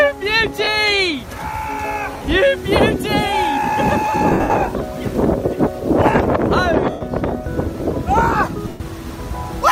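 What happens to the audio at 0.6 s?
From 0.64 to 0.67 s, lost LE Audio frames leave a 30 ms gap, consistent with three 10 ms frames. The LC3 decoder refills it by reusing the last spectrum with random signs, producing a brief noisy smear.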